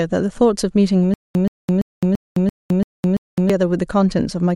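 From 1.14 s to 3.50 s the speech catches on a single short fragment, about 126 ms long, and replays it seven times, each repeat followed by roughly 212 ms of dead digital silence, so the burst returns on an even 338 ms cycle. This stutter with silent gaps is likely a stalled player or stream retrying, replaying its last buffered fragment and then running empty, and the speech that belonged in that stretch is lost.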